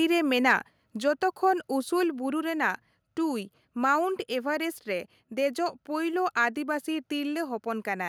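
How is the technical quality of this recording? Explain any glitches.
The recording has two glitches close together near the start, both tied to the microphone level.

From 0.50 to 0.53 s, just before "ᱡᱚᱛᱚ ᱠᱷᱚᱱ", there's a short microphone overload. Peaks push about 2 dB past the converter's limit, so their tops get flattened. Around 2% of samples are clipped, giving a brief harsh, crackly edge. It's likely the input gain was set too hot.

At about 1.02 s, again just before "ᱡᱚᱛᱚ ᱠᱷᱚᱱ", the microphone volume steps down. Speech and background drop together by about 3 dB in one sudden step. This is likely the call software reacting to that clipped peak and turning the device's input level down.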